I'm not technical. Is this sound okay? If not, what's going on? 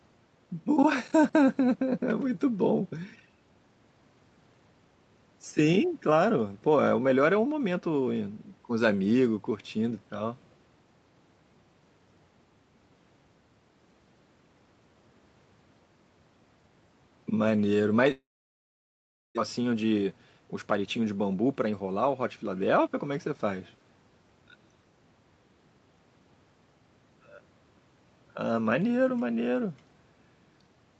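No, not quite. There's a gap around 18.11 s and the speech comes back a bit hurried afterwards.

From 18.11 s to 19.39 s you'll hear a long network dropout. The last bit of sound gets smeared into a short buzz that fades, then it goes quiet. When the speech returns, about a second of it is simply gone. It was never played, so nothing was skipped on your end. The likely cause is the connection briefly stalling, so that chunk of audio never made it through.

Right after that, the speech comes back sounding rushed. That's jitter buffer speed-up. After the stall, the receiver had a backlog of audio stored up. To catch up, it trimmed out tiny slivers of sound many times in a row, so the talking plays faster but at the same pitch. It runs about 12% fast from 19.59 s to 20.87 s, cutting out a bit over a tenth of a second in total. Then it runs about 11% fast from 21.38 s to 21.81 s, cutting out roughly another twentieth of a second.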